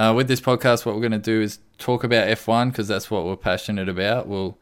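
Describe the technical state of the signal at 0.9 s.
At 0.9 s the speech signal is intact, with no audible fault at that moment.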